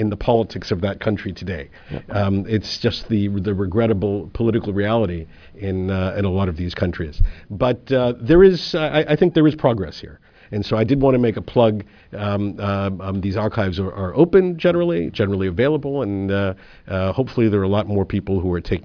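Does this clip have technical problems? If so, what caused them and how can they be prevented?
No, no technical faults here.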